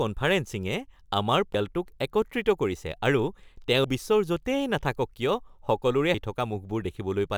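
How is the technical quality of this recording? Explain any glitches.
The speech has three abrupt skips, at 1.54, 3.84 and 6.14 s. At each, about a fifth of a second vanishes and the two sides join with no gap. This is likely audio missing between chunks, lost each time the recorder closes one 2.5-second chunk and opens the next.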